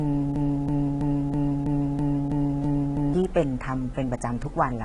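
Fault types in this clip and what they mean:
AAC compression: The speech sounds dull and smeared, with a fizzy, warbling edge on sibilants, the kind of damage an AAC-LC encoder likely leaves when it is starved of bits, here fitting roughly 32 kbps. At that rate the encoder throws away detail its hearing model judges least audible. On a spectrogram, energy stops dead at about 11.5 kHz, and the band below shows patchy holes and blotchy, noise-like fill instead of clean harmonic structure.
broken-record loop: From 0.36 s to 3.14 s a 326 ms fragment repeats back to back, nine times. This is likely a stall in the player, encoder or stream, which kept resending the last chunk it held. Whatever speech belonged in that stretch is gone. On the waveform the same envelope shape tiles identically along the stretch, and on a spectrogram an identical block of patterns recurs at a fixed spacing with hard seams between copies.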